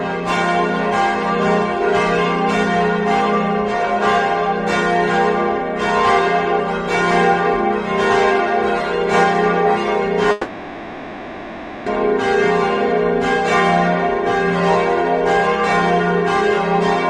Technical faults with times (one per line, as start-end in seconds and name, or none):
10.31-11.87 long network dropout